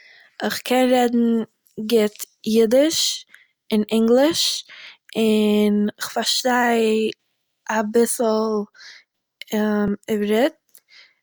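At 2.23 to 2.26 s, just before "יידיש און אינגליש און", the audio jumps ahead where compressed frames are skipped: about two 20 ms frames, around 40 ms of audio, never reach playback. At 4.87 s, after "יידיש און אינגליש" and before "און איך", a click or stutter comes from overlapping chunks. Each 5 s chunk starts 6.5 ms early, so that sliver plays twice. At 6.40 s, right after "און אינגליש און איך", another jump is a single skipped 20 ms frame. The same chunk-overlap click recurs at 9.88 s, exactly one 5 s chunk later.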